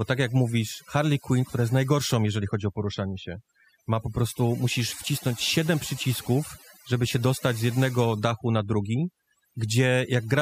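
A speech recording with overdone noise removal running through the whole clip. The background between phrases drops away, dotted with brief twinkling specks, while the voice's quieter components are stripped out along with the noise. That frequency-by-frequency behaviour separates it from a simple noise gate, which would mute or pass the entire signal at once rather than leaving isolated bands flickering in the gaps.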